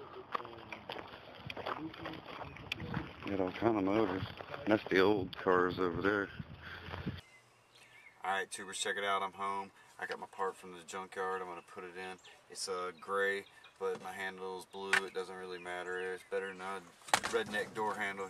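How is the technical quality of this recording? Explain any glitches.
No glitches can be heard anywhere in this recording. Nothing in the signal points to a technical problem.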